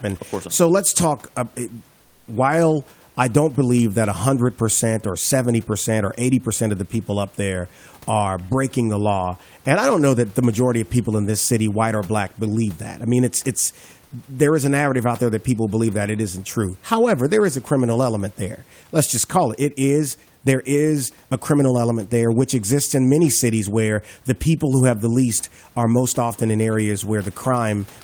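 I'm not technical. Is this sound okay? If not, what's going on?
No. From 2.01 to 2.27 s, just before "while I don't believe", the room's background is replaced by comfort noise: a smooth, quieter hiss. The likely cause is the sender pausing transmission in a gap. Unlike a dropout, it never goes fully silent.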